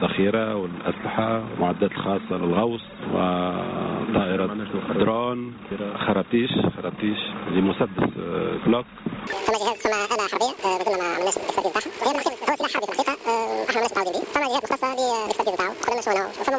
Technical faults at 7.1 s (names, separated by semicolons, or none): none